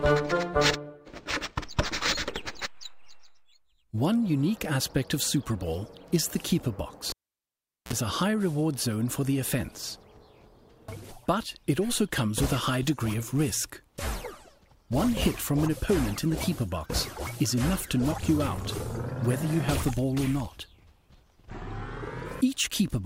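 It's a general audio clip with one clear fault: a cable pulled and plugged back in while live, from 7.10 to 7.93 s. There's a pop as the connection breaks, then about 0.78 s of near silence. As the plug goes back in, a 48 ms burst of 60 Hz mains buzz comes through while only the tip is touching, and a second pop marks the sound coming back.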